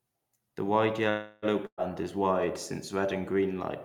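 From 1.09 to 1.45 s the speech stops moving forward and its last sound is drawn out as a buzzy hiss that dies away over about 330 ms. The speech then picks up exactly where it left off, so nothing is lost, but everything afterward arrives about 330 ms later. This is a call audio freeze, likely caused by packets stalling in transit so the jitter buffer ran dry, with the receiver padding the wait by extending the last sound.

At 1.66 to 1.81 s there is a shorter held, fading sound that sinks into silence, and the speech comes back further along, about 120 ms further than where it broke off. That is a burst of packet loss. Several consecutive packets never arrived or came too late to play. The receiver stretched and faded the last sound to cover about 111 ms of the hole before going quiet, and the stretch of speech those packets carried is missing.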